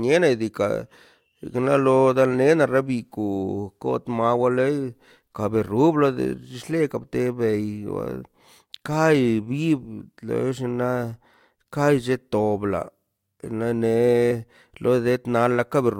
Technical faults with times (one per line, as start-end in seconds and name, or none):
14.30 compressed frames skipped